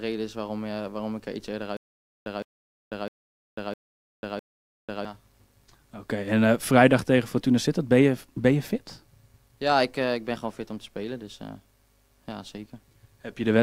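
1.77–5.05 s: stutter with silent gaps, a 161 ms fragment repeating five times amid 495 ms silences, likely a stalled stream.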